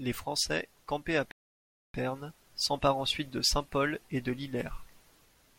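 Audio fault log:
1.31–1.94 s, rebuffering stall: right after "campés à" the speech drops into dead silence for about 0.63 s, then picks up again at exactly the syllable where it broke off, with nothing skipped or repeated. The player had used up all the audio it had downloaded and had to wait for more to arrive before continuing. That is why the gap adds time to the clip rather than cutting anything out of the speech.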